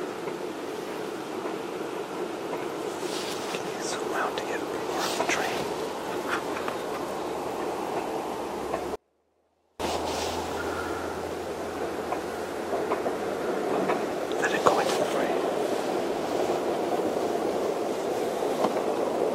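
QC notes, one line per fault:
8.96 to 9.80 s, audio dropout to a faint residue: the sound cuts out abruptly for about 0.84 s, leaving only a faint leak roughly 40 dB below the normal level, then snaps back. The likely cause is a brief signal loss while the path after it stayed live.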